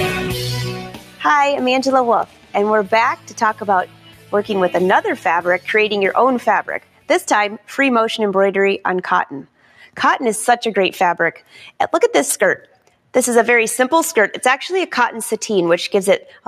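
A noise suppressor meant for speech is running across the whole clip, and it's treating steady, sustained parts of the sound and their tails as noise to be pulled down. Attacks get through, then the held material drops away, so the level keeps swinging by something around 10 dB. You hear that as pumping, fluttering or a thinning of the sound, with sustained parts never sitting at a steady level.

On top of that constant swing, there are eight spots where the noise suppressor cuts the sound harder than the rest: 0.74 to 1.24 s, 2.25 to 2.55 s, 3.16 to 3.64 s, 3.86 to 4.33 s, 6.8 to 7.09 s, 9.44 to 9.97 s, 11.35 to 11.57 s, and 12.59 to 13.09 s. Each dips by about 11 to 12 dB at its deepest, lasting a few tenths of a second up to about half a second. The steady or decaying material sinks or gets its decay chopped short.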